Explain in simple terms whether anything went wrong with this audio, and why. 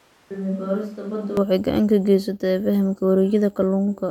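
Until about 1.37 s there is likely a switch to a distant microphone, so the speech sounds hollow, roomy and noticeably quieter, with extra background noise.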